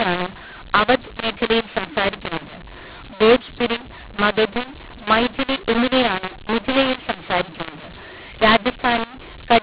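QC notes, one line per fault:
Throughout: mu-law and A-law mixed up. The speech was coded with the A-law curve and decoded as mu-law. The two laws map the 8-bit codes to different levels, so the samples land at scrambled amplitudes. Some come out too loud and others too quiet. The sound is harsh and distorted. The quietest codes map well above silence, so the pauses fill with noise. The band still stops at 4 kHz, as expected for telephone audio.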